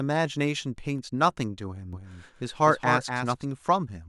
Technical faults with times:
1.93-3.45 doubled audio track

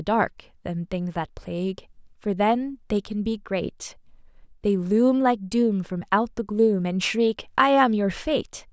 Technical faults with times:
none

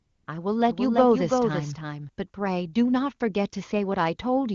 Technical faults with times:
0.00-0.27 AMR comfort noise
0.69-2.09 doubled audio track

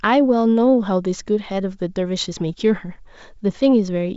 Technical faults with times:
none

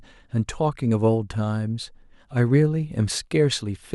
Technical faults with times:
none

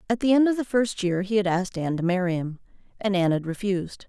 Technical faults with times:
none

